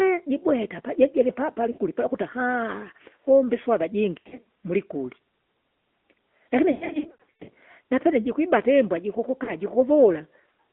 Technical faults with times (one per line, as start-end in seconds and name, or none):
0.00-10.72 AMR narrowband mobile codec
1.72-1.79 lost AMR speech frames
4.18-4.45 lost AMR speech frames
6.72-7.50 lost AMR speech frames
9.44-9.52 lost AMR speech frames